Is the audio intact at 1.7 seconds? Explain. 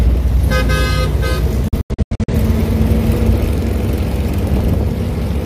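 No. A digital broadcast dropout runs from 1.68 to 2.34 s. Failed frames mute the receiver, so the sound vanishes in short, quickly faded holes.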